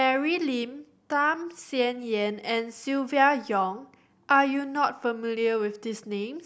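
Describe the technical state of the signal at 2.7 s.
At 2.7 s the speech signal is intact, with no audible dropout, clipping, distortion or other technical fault at that moment.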